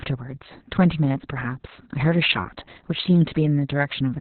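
From start to end the speech carries heavy Opus voice compression. Nothing reaches above about 4.3 kHz, so it sounds muffled and telephone-narrow. The coarse excitation coding makes it hoarse and slightly robotic, which fits the narrowband SILK mode at about 6 kbps.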